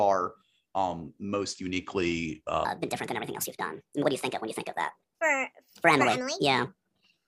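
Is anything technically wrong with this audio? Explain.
Yes. From 2.65 s, right after "um most uniquely", to the end of the clip, there is a section at the wrong speed. This section runs at 1.46 times its recorded rate, likely because an editor or player fitted it to the wrong clock. Speed and pitch rise together, so the speech suddenly sounds hurried and chipmunk-like, raised by about seven semitones, and stays that way to the end.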